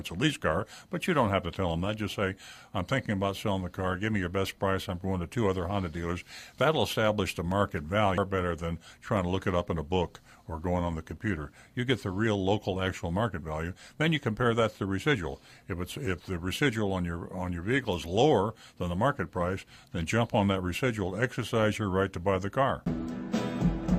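From 6.52 s to 11.17 s, periodic USB or driver dropouts occur once per second. A blocked driver silences about a millisecond each time, heard as regular ticks.

At 8.18 to 8.21 s, damaged data in the compressed stream makes the decoder lose sync. This gives a brief squawk or blip.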